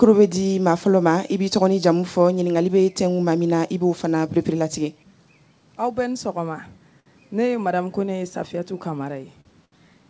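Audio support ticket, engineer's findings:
Short stall from a late packet, three times: 7.00 s (about 59 ms held), 9.41 s (41 ms), 9.65 s (70 ms). Sound briefly frozen, stretched with slight buzz or dip, then resumes exactly where it stopped. Jitter buffer ran dry; receiver filled until the packet arrived. Unlike loss concealment, nothing is skipped, and playout delay grows by the fill length each time. Band stops at 8 kHz, which fits a G.722 call codec.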